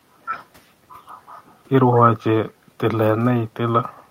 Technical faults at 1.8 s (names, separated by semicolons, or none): none